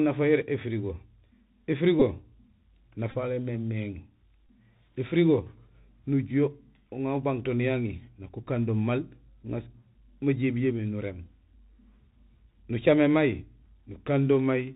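Throughout the clip the speech carries the sound of a Bluetooth CVSD headset codec, which fits a 64 kbps CVSD link. Everything above 4 kHz is missing, giving the narrow telephone band. A granular hiss sits under the speech, s sounds come out scratchy, and loud bright moments distort because the one-bit up-or-down step cannot climb fast enough. That slope-overload grit and the hiss tell it apart from a plain low-pass filter or ordinary telephone band-limiting.

From 2.00 to 2.02 s a Bluetooth headset packet repeat breaks in. Lost packets were replaced by decoding the previous packet's bits again, which sounds like a brief buzzy flutter and fits about four repeated 3.75 ms packets. A second, scattered burst runs from 3.11 to 3.16 s. Its repeats are spread over about 45 ms, with the longest run around 10 ms, so it is a broken rattle rather than one tone. At 4.47 s a shorter repeat leaves another short buzz. 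Unlike a dropout or a click, the sound doesn't go silent. Instead, the repeated 3.75 ms segments give a roughness near 267 Hz.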